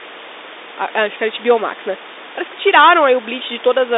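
No technical faults can be heard in this speech. The G.711 telephone line keeps the sound within its 300 Hz to 3.7 kHz band with nothing above 3.8 kHz, and the room noise sits about 17 dB beneath the speech.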